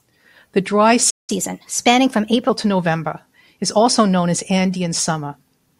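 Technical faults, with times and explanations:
1.10 to 1.30 s, playback stall: the speech cuts to silence mid-flow for about 180 ms, then picks up again. That's likely the player running dry on data or having its output thread blocked, so nothing reaches the output until it recovers.
1.30 to 2.49 s, catch-up at higher speed: straight after the gap the speech runs at 1.15 times normal speed, pitched up about two semitones, as the player resamples its backlog to win back lost time, then settles to normal.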